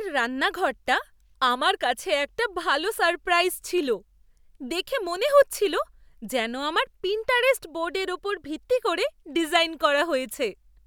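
No audible technical faults.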